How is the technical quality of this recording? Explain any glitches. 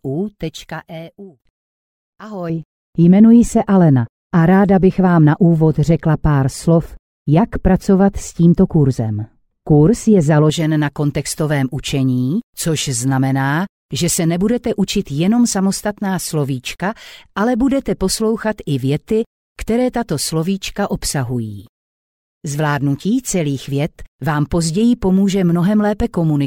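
There is one clear fault. De-emphasis applied wrongly, from 2.50 to 10.50 s: a treble-cut curve meant to undo pre-emphasis has been applied where none existed or applied a second time, tilting the response smoothly downward to about 11 dB lower at 10 kHz than at 1 kHz, so the sound turns dull and muffled.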